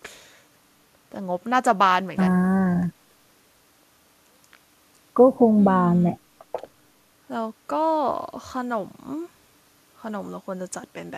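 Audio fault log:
No technical faults are present in this speech recording; the signal stays continuous and stable for its whole duration.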